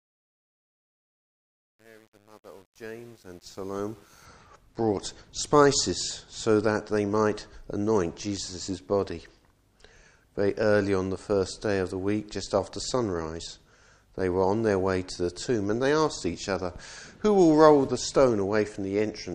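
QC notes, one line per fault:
0.00–4.25 s, truncation distortion on a fade: the fade-in sounds gritty, worst up to 3.88 s. At low level the gain stage quantizes the waveform to coarse undithered steps, which fits about 9-bit resolution, before the fade reaches full level.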